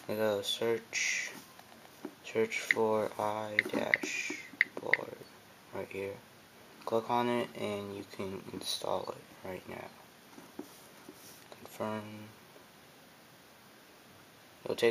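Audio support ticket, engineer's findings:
No audible defects found on review; signal level, timing and continuity hold steady throughout, with nothing pointing to a fault in the capture, processing or playback path.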